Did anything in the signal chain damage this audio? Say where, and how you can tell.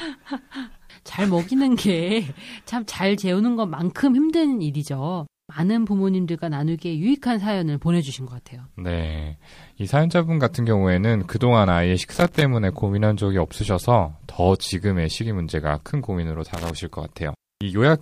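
Yes: loose connector crackle in the analogue wiring, at 12.11–12.42 s and 16.54–16.70 s. An intermittent contact chops the speech, showing as ragged waveform gaps and broadband vertical spectrogram streaks.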